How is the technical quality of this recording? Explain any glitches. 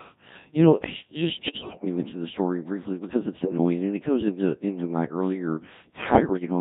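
The technical quality is poor: the whole clip is low-rate vocoded speech, and three bursts of transmission errors break it up further.

Throughout, the audio has passed through the Codec 2 vocoder at 1.3 kbit/s, with heavy damage. The codec sends only pitch, voicing, level and a coarse spectral envelope, and the decoder rebuilds the voice from sine waves. The result sounds buzzy and robotic. On a spectrogram the harmonics look unnaturally regular and smeared, with little fine detail. The waveform has lost its original shape.

Bit errors on digital voice radio corrupt the stream from 1.37 to 1.85 s, just before "me mention the story"; from 3.40 to 3.58 s, between "story briefly because it's" and "and it goes into"; and from 6.12 to 6.46 s, right after "into into my earlier". Flipped bits scramble each affected frame's pitch, level and spectrum. The voice turns into warbling bleeps and gibberish, worst in the first burst. 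A spectrogram would show abrupt frame-to-frame jumps in harmonic spacing and energy.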